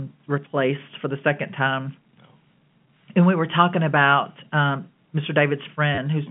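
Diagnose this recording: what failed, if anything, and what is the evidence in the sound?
The failure is in the network stage: packet loss with the last packet repeated. At 5.95 to 5.98 s the speech breaks into a brief robotic stutter lasting 30 ms. The receiver had no new audio, so it replayed the last packet it held. The spacing suggests three 10 ms packets, giving a short 100 Hz buzz. The G.711 telephone coding underneath shows its usual 150 Hz to 3.4 kHz band.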